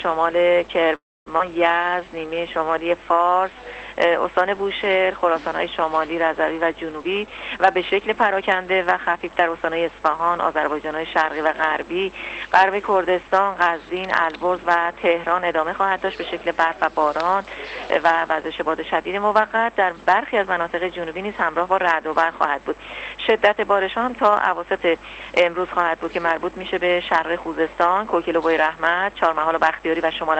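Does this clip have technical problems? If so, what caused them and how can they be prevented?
Yes, there are four. From 0.95 to 1.28 s the sound stalls, trailing off into about a quarter second of silence before resuming. That's likely a call audio freeze: packets got held up, the jitter buffer ran dry, and the receiver stretched the last bit out until they arrived. A bit more buffer headroom or a steadier network path prevents it.

Right after, at 1.38 to 1.41 s, there's a skip ahead, where about a fifth of a second is dropped and the two sides are spliced almost directly together, probably as the buffer shed the backlog the stall created. Smoother packet delivery, so the buffer never has to dump a chunk at once, avoids this.

From 1.78 to 3.51 s a jitter buffer slow-down plays things at about 89% speed, same pitch, with 192 ms of repeated pitch periods padded in to rebuild the reserve. 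Keeping network jitter low stops the buffer from running short in the first place.

From 6.96 to 9.58 s a jitter buffer speed-up runs at about 112%, trimming roughly a third of a second to drain excess delay the buffer was holding. Reducing packet bunching on the network, for instance with better queue management, prevents it.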